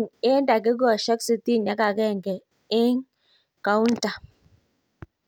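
Speech that likely passes between two devices running on unsynchronised clocks, apparently about 500 parts per million apart, so single samples slip roughly every 40 ms. From 0.11 s to 5.26 s this produces clock slip clicks, a fast, soft rattle most audible on louder passages.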